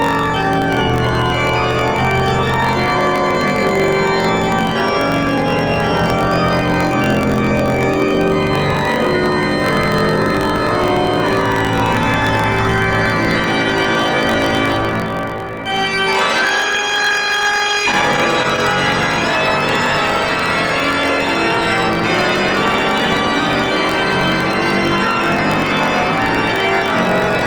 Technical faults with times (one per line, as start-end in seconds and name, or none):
0.00-27.47 block size mismatch (truncated)
17.92-18.73 repeated stalls (stutter)